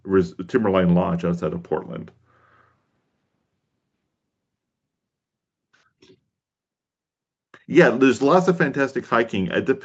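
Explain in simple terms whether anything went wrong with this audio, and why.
Nothing stood out on listening; the speech sounds like an ordinary online call, with the brightest highs stopping around 8 kHz, as that kind of call connection normally does.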